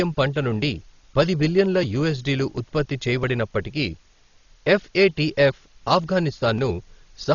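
A steady, even hiss sits under the speech from start to finish, roughly 35 dB below it, with no crunch or distortion riding on the voice. That is low bit depth with dither: rounding to what sounds like about 9 bits, smoothed by added noise, turns the error into constant white noise. Over the whole clip the sound is also dull, with nothing above 7 kHz, and a rough, fluttering noise clings to voiced tones. This is likely Dolby Digital compression at a very low bitrate, around 32 kbps, where the encoder narrows the band and the decoder fills starved frequency lines with noise.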